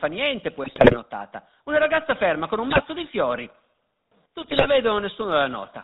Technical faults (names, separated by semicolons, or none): GSM full-rate codec; GSM bit errors; sudden gain jump